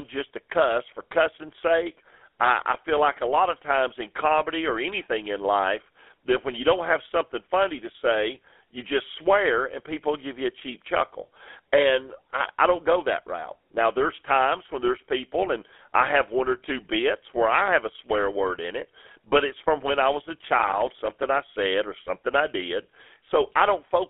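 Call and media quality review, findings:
GSM full-rate codec, throughout: constant buzzy, gravelly roughness, band 300 Hz–3.5 kHz; pulse-driven vocal-tract model, fits 13 kbps. Steady, unlike the brief crackle.

Processor overload crackle, 20.39–21.26 s, between "when I was a" and "I said or something": gritty tearing from around thirty missed buffers of about 3 ms, each a silent gap.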